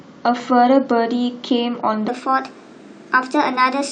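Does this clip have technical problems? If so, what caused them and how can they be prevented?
Yes. From 2.08 s right through to the end at 3.91 s there's a section at the wrong speed. The speech jumps to 1.21 times its recorded rate, so it sounds rushed and sits roughly three semitones higher. The likely cause is that segment being played or resampled against the wrong clock during editing. To prevent it, keep sample rates matched across every clip and setting in the chain, and listen back after edits.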